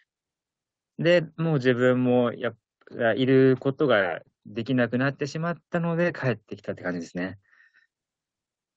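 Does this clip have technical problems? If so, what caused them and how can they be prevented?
No, there are no technical faults in this speech clip. It has passed through a call's microphone processing and an Opus call path at about 20 kbps, so nothing is heard above about 8 kHz, as is normal for that codec setting.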